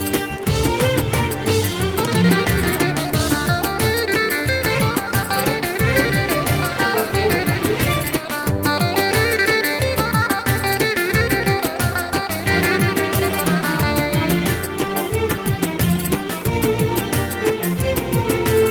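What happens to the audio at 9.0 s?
At 9.0 s the audio carries on without any audible fault: no dropout, click, distortion or other disturbance.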